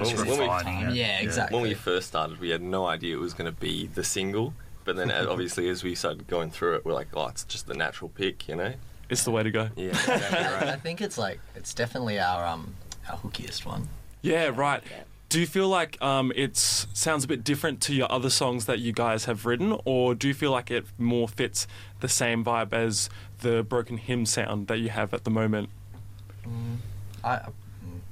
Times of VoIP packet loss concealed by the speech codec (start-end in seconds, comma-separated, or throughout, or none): none